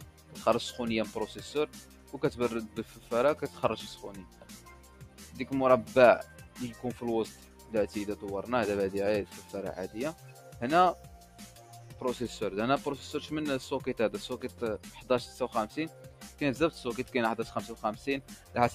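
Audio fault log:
Throughout: noise suppressor applied to music or sounds. A speech-tuned suppressor treats steady tones and tails as noise, so levels swing by around 10 dB and the sound pumps.
0.00–0.35 s, 1.83–3.11 s, 4.20–7.72 s, 9.42–11.97 s, 14.52–17.14 s, 18.22–18.55 s: sound cut by the noise suppressor. Sustained and decaying parts sink by about 7 to 8 dB while sharper onsets pass, thinning held passages.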